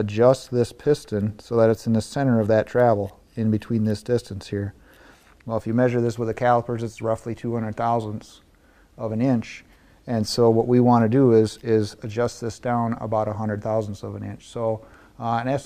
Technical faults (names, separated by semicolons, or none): none